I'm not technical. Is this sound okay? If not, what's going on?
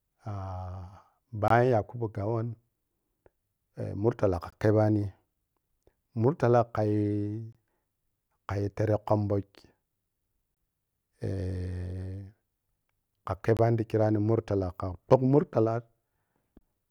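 No. The speech stops for about 21 ms at 1.48, 4.50, 7.53, 10.55, 13.57 (just before "ti chirano") and 16.59 s. This is a gap between chunks. Unlike random dropouts, no speech is lost, and the holes come about every 3 seconds.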